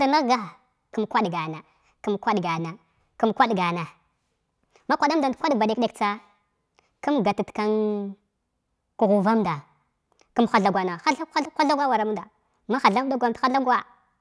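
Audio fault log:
throughout wrong sample rate: samples are played out faster than they were captured, with no rate conversion. The 1.38 times speed-up fits 16 kHz material played at 22 kHz. The speech sounds hurried and sits 5.6 semitones high, with pitch and tempo rising together.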